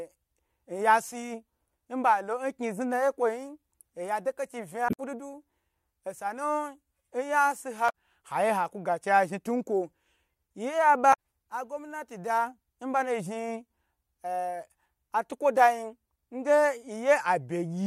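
At 4.86 to 5.00 s, 7.86 to 7.90 s and 11.13 to 11.15 s the speech is broken by short chirps and blips typical of damaged data in a compressed stream. At each point, bytes in the encoded stream have been lost or corrupted, so the decoder misreads the affected frames, loses sync and has to search for the next valid frame header. The first, at roughly 130 ms, is the longest. The last is a brief 20 ms blip.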